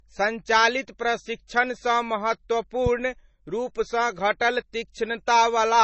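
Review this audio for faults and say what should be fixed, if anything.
The speech sounds dull and smeared, with nothing above 8 kHz and a watery, swirling texture throughout. This is likely low-bitrate audio saved at a high bitrate: the band limit and artefacts point to a very low-rate MP3, around 24 kbit/s, later re-encoded at something like 320 kbit/s, which cannot restore what was discarded. To prevent it, go back to the original recording or a lossless copy and encode once at an adequate bitrate.

From 2.86 to 2.89 s a single loud pop, about 10 dB above the speech, cuts across the sound while the speech continues underneath. The likely cause is a sudden voltage step from a plug, switch, static discharge or driver glitch. To prevent it, secure connections and avoid switching or handling cables while recording; for this clip, repair the pop with a click-removal tool.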